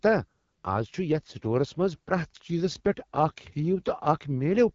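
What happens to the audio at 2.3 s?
At 2.3 s the speech sounds rough and raspy with nothing above about 7.5 kHz. The AMR wideband (HD Voice) codec, running throughout, fits a low rate near 8.85 kbit/s.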